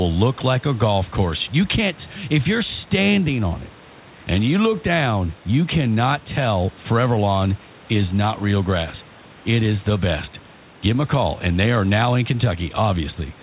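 Nothing goes wrong anywhere in this recording; the faint room noise sitting about 28 dB under the speech and the narrow telephone band, with nothing above 4 kHz from the 64 kbps G.711 A-law call codec, are just how the room and the call path normally sound.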